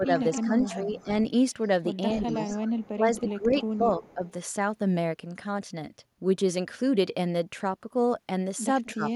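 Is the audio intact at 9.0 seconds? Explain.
No. From 8.85 to 9.13 s a faint delayed copy of the speech trails the talker by 255 ms, roughly 20 dB quieter. This is an echo leak, likely from a loudspeaker on the far side whose echo canceller let some of its microphone pickup return down the line.

Overlapping that, from 8.95 to 9.07 s, the talker's speech dips sharply, by around 15 dB at its deepest, for about a tenth of a second. This is speech suppressed in double talk: with both sides sounding at once, the canceller likely could not tell the talker from the echo and attenuated both.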